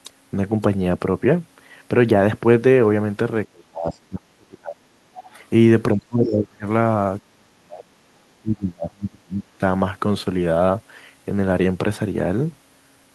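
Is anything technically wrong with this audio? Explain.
Yes. From 3.47–4.92, 5.95–6.65, 7.22–7.93 and 8.4–9.61 s there's speech suppressed in double talk: the speech sinks by around 30 to 35 dB, likely because the echo canceller ducked everything while both sides spoke at once. There's also the other side's voice leaking through, faintly at 3.92–3.97 s (around 35 dB down) and more clearly at 5.15–5.44 s (around 20 dB down), likely residual loudspeaker echo the canceller missed.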